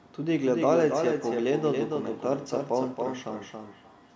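From the start, a doubled audio track: a second full-band copy, about 5 dB quieter, trails about a third of a second behind, likely from a slower capture path. Unlike echo, it never thins or decays. From 0.59 s to the end, feedback echo between two devices adds repeats at roughly a third-of-a-second spacing, peaking about 17 dB below the speech. These repeats grow thinner and more ringing each pass, under the call processing's normal 8 kHz ceiling.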